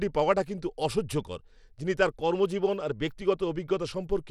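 Right from the start and all the way through, this speech has the grainy, gritty character of Bluetooth SBC compression, and that's likely the cause. SBC chops the signal into a handful of wide frequency bands and hands out bits without any real model of hearing, so at a tight setting the upper bands are starved and the rest get quantised roughly. The damage is plainly audible here, consistent with a low bitrate of around 96 kbps, and the spectrum stops at about 19.5 kHz.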